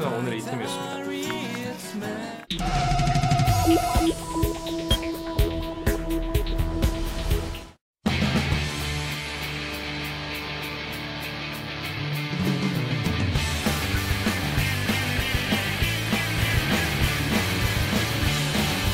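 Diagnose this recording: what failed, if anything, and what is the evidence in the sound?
A doubled audio track kicks in abruptly at 16.37 s and runs to the end. A clean copy trails about a second behind, around 5 dB down, likely a second, slower capture path mixed in.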